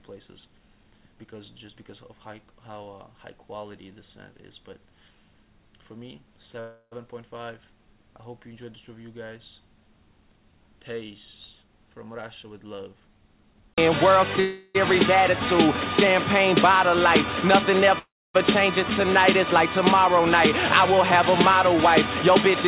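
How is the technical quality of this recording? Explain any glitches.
The recording has the narrow, band-limited sound of a phone call, with nothing above 4 kHz, and it has several timing glitches: three freezes, a stretch of hurried playback, and one jump forward.

Call audio freeze, at 6.60 to 6.94 s, 14.40 to 14.77 s and 17.99 to 18.36 s: the sound stalls into a fading buzz or hiss, then resumes from where it stopped. The holds last 315, 346 and 357 ms. The first fades to 70 ms of silence, the second to only 20 ms, and the third to a long 270 ms. The likely cause is packets arriving late and the jitter buffer running dry, so the receiver extends the last sound until data arrives. Nothing is lost; a gap is inserted instead.

Jitter buffer speed-up, 11.62 to 14.21 s: the audio rushes at about 112% of normal speed, though the pitch stays the same, so it sounds hurried rather than higher. 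The buffer had built up more audio than it wanted, so the receiver repeatedly cut out tiny pitch-period slices, about a third of a second in total, to bring the delay back down.

Skip ahead, 18.90 to 18.93 s: playback lurches forward with almost no gap, and about a fifth of a second of audio is missing. The two sides of the cut are butted together almost directly. A chunk was dropped, in transit or when the buffer overflowed, while later audio was already queued, so the player jumped straight to it.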